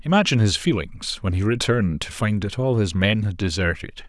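No technical faults turn up anywhere in this speech recording; there's simply nothing here that needs pointing out.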